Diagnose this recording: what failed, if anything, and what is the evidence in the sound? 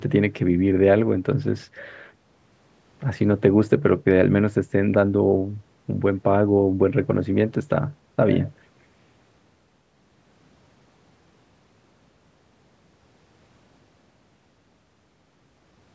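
Nothing failed; no faults found.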